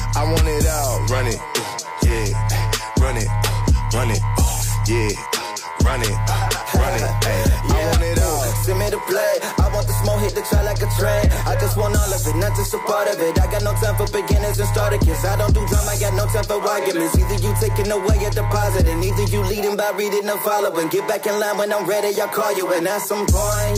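No technical fault can be heard anywhere in the audio, and the signal holds steady for its whole duration.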